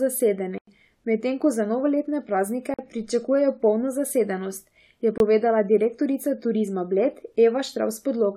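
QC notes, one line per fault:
0.58–0.67 s, block of digital silence: speech cuts abruptly to silence for 93 ms and back, with no fade; fits a 4096-sample buffer left unfilled.
2.74–2.79 s, block of digital silence: a 46 ms hole with no fade; the length fits a 2048-sample output buffer left empty.
5.18–5.20 s, block of digital silence: 23 ms dropout to silence, heard as a short hole; fits a 1024-sample buffer not filled.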